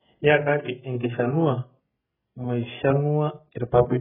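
From start to end the speech sounds dull and smeared, with nothing above 3.5 kHz and a warbling, fizzy texture on sustained sounds and sibilants. The likely cause is heavy AAC compression, AAC-LC at a rate that fits about 8 kbps, discarding and thinning the spectrum.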